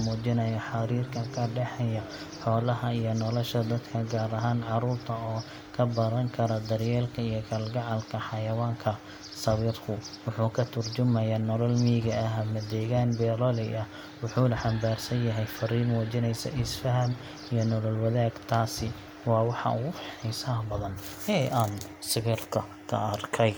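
No technical faults can be heard anywhere in the speech recording, with the signal holding steady and continuous throughout.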